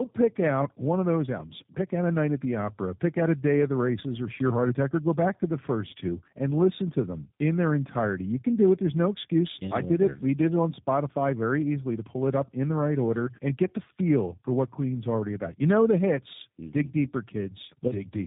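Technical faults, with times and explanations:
Throughout: tandem speech coding. The call passed through two low-rate speech codecs in a row, the second fitting G.729A at 8 kbit/s, each re-coding the previous one's already damaged output. The speech sounds rough, muffled and warbly, with nothing above 3.8 kHz.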